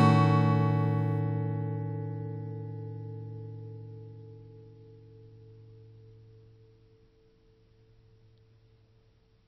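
A recording of everyday sound that drops abruptly to an adaptive stream at a lower bitrate at 1.2 s and stays there to the end. Everything above 5.8 kHz vanishes and swirly codec artefacts rise, which fits a switch from 128 to 24 kbit/s MP3. Unlike a dropout, there's no gap.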